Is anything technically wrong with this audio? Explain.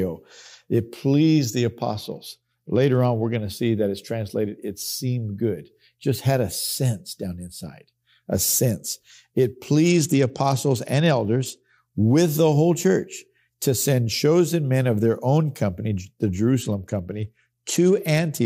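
Yes. The speech passes through three Bluetooth SBC bit pool drops, at 1.82 to 3.36 s, 9.88 to 11.78 s, and 16.62 s to the end. Each time the treble dulls and a gritty noise rises, consistent with the link throttling the bit pool from 28 to 11, around 90 kbps, which starves the upper sub-bands and coarsely quantises the rest. On a spectrogram the high band empties abruptly and grainy speckle fills the remaining range; the waveform's envelope barely changes.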